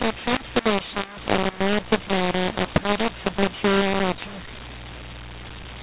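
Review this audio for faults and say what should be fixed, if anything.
Throughout, the speech has a mu-law and A-law mix-up: A-law G.711 samples decoded as mu-law, which scrambles levels, roughens the speech and fills pauses with noise. Prevent it by signalling the companding law explicitly and configuring the decoder to match the encoder.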